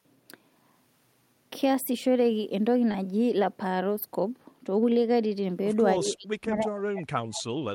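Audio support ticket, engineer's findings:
Short concealed packet loss around 2.91 to 2.96 s: quick smear in the speech, about 20 ms missing and patched by the decoder's concealment, which extended the last sound, then crossfaded back. Jitter buffer/PLC path.

Speech suppressed in double talk, 5.99 to 7.58 s: talker dips hard in chunks, down by roughly 40 dB at worst, about a second and a half total. Likely the echo canceller clamping both sides when it couldn't separate talker from far-end echo.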